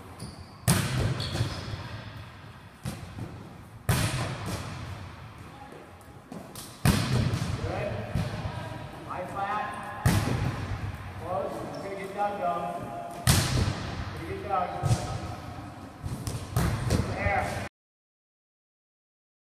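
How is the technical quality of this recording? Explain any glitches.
The recording has one glitch: a cut-off end. At 17.68 s the sound stops abruptly mid-event and drops straight to digital silence with no decay. The final buffers were never written or played out.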